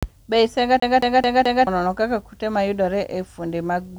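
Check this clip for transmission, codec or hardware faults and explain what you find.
One hardware fault: from 0.80 to 1.67 s, just before "nono kaka kute mayudore", the speech sticks like a CD stuck on one turn. A scratch bounces the laser back, repeating the same 218 ms slice four times with short mutes. Unlike packet-loss concealment, the repeats stay identical and never fade.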